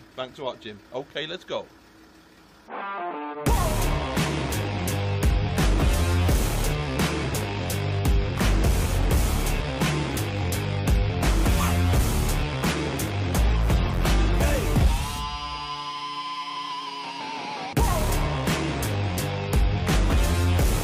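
No technical faults can be heard anywhere in this recording, and the signal holds steady from the first moment to the last.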